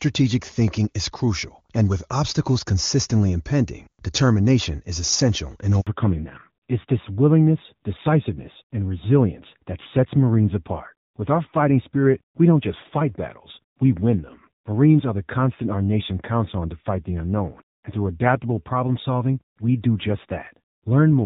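At 5.81 s, right after "determination is essential in", the speech fades out within a few tens of milliseconds and stays silent for 60 ms: a handover gap, where no frames arrived while the call switched networks. Unlike packet-loss concealment, nothing is filled in or smeared over.

From 5.87 s to the end, the sound changes from clear HD Voice, where AMR-WB at a rate that points to 23.85 kbit/s leaves little audible damage, to a fallback to narrowband. Nothing remains above 4 kHz, and the rougher, duller texture points to AMR-NB near 7.4 kbit/s, not a simple low-pass filter.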